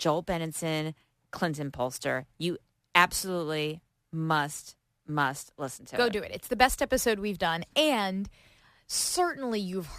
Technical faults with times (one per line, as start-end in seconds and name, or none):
0.00-9.99 sample clock jitter